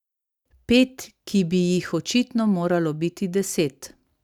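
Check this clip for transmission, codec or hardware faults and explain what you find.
No fault can be heard anywhere in the speech. There is nothing here that calls for explanation.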